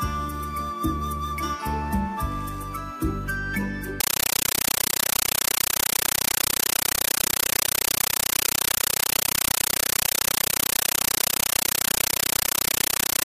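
At 4.00 s, a compressed stream played as audio: a Dolby Digital (AC-3) bitstream is passed to the output as if it were ordinary samples instead of being decoded. Each coded frame becomes a 9.33 ms blast of noise followed by silent padding, repeating 31.25 times a second. From 4.00 s to the end, the sound is replaced by loud, chattering static with that steady rhythm, which fits a 448 kbps stream.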